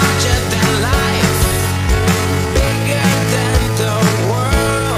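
At 1.43 s the pace drops abruptly and stays slowed to the end, running at 0.623 times the original speed while the pitch is unchanged. This time-stretched section is likely the work of software lengthening the audio by repeating short pieces, which makes the sound drag. On a spectrogram the harmonic lines keep their height but events spread wider in time, with repeated copies. The waveform shows stretched envelopes.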